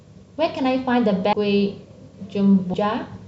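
Speech with compressed frames skipped at 1.33 s and 2.74 s. The audio jumps ahead roughly half a second, then about 0.3 s, consistent with 32 ms frames. The spectrogram shows an abrupt discontinuity.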